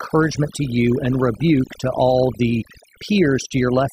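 Across the whole clip, overdone noise removal is at work: bands near the noise estimate are pushed toward silence, leaving twinkling specks in the gaps. Unlike a noise gate, which mutes everything at once, this cuts individual frequencies.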